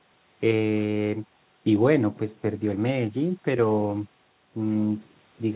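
No technical faults heard.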